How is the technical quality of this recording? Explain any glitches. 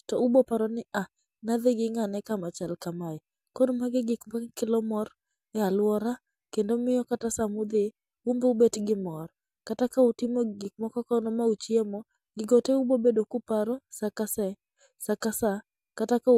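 The recording has no technical glitches to explain. The speech continues without any audible fault at any point.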